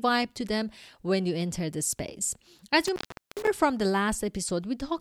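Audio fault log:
2.83–3.47 s, intermittent contact: after "you enter the space" a loose connection opens for about 0.41 s, cutting the speech with edge crackle and faint hiss before "from the".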